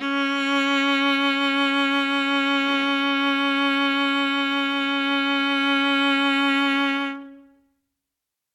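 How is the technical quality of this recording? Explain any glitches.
Listening through the music, nothing stood out as a technical problem or glitch.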